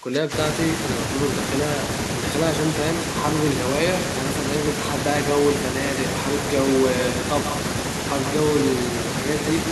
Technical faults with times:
0.00-0.33 speech suppressed in double talk

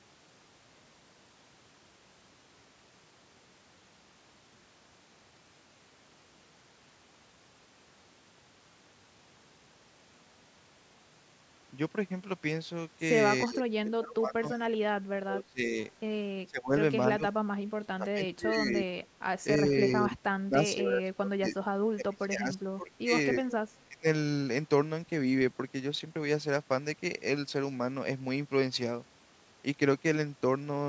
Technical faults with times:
13.44-15.77 speech suppressed in double talk
16.46-16.73 speech suppressed in double talk
17.16-17.33 speech suppressed in double talk
17.67-18.87 speech suppressed in double talk
19.64-21.56 speech suppressed in double talk
21.92-23.50 speech suppressed in double talk
23.86-24.06 speech suppressed in double talk

